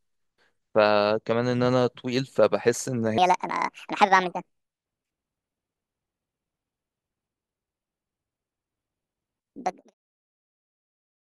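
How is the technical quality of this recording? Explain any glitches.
The recording has one clear problem: from 3.18 s to the end, it runs at the wrong speed. At that point the speech suddenly plays about 1.56 times too fast, so it sounds hurried and its pitch jumps up by roughly seven semitones, giving it that chipmunk edge. Pitch and tempo shift together, which likely means that stretch was played back or resampled against the wrong clock. The fast section still fades out smoothly from around 9.5 s to 9.94 s.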